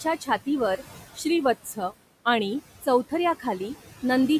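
Throughout the speech, noise suppressor artifacts are present: the room noise, about 17 dB below the speech, is pulled down by about 14 dB between phrases. From 1.26 to 2.59 s the speech runs about 5% slow and drops nearly a semitone, then snaps back, likely a drift correction step in clock-matching software.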